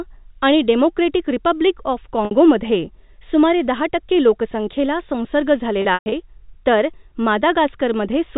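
A speech recording carried over G.711 telephone coding has a brief held, buzzy note at 2.25 s, and after "टक्के लोकसंख्येला संसर्ग" at 5.82 s a stretch to 6.12 s stutters and fades. That is packet loss with pitch repetition: the receiver repeated the last pitch period to cover about 60 ms, then 180 ms scattered over 300 ms.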